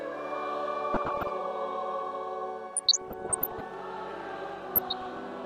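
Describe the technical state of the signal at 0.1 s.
The signal at 0.1 s is intact, with no audible fault at that point.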